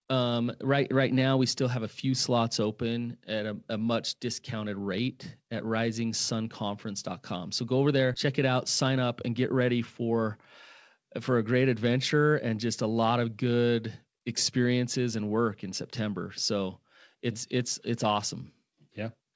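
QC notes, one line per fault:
8.14–8.16 s, skip ahead: Right after "go over" the speech lurches forward, with no silence or fill at the join. Roughly 400 ms of audio is simply gone, so part of a word or a short phrase vanishes and the two sides are butted together almost seamlessly. This points to a stretch being discarded, in transit or by an overfull jitter buffer, while later audio was already queued, cutting the delay by about that much.
8.28–9.61 s, jitter buffer speed-up: Just after the jump, the speech sounds slightly rushed for over a second. It runs at about 105% speed while the pitch stays natural, so the hurry comes across as clipped pacing rather than a raised voice. The receiver was still holding more audio than it wanted and trimmed short pitch-period-sized slices repeatedly, around 70 ms in total, to pull the playout delay back down.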